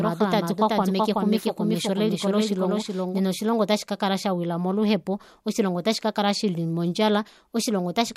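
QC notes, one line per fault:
0.0–3.2 s, doubled audio track: a second capture path or an edit out of step likely mixed the same speech in twice, with an equally loud, dry copy trailing by roughly 0.4 s, then stopping abruptly just before "oshilongo ota shikakala shawila".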